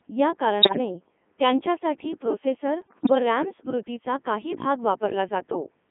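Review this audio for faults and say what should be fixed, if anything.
The speech runs through the Codec 2 vocoder the whole way. It sounds robotic and buzzy, confined to roughly 200 Hz to 3.5 kHz, consistent with its top 3.2 kbit/s mode. Unlike ordinary lossy codec smearing, the voice is rebuilt from sine waves, not preserved. Prevention: use a waveform codec where bandwidth allows.

Bit errors on digital voice radio appear at 0.62 to 0.78 s and at 2.82 to 3.15 s, between "त्यांच्यासाठी प्रोसेसर" and "रॅम स्मृती चा काही". Pitch, level and tone jump into warbling gibberish, pointing to a few percent of bits flipped in the vocoder frames. Unlike dropouts, sound continues but turns nonsensical. Prevention: stronger forward error correction or better signal margin.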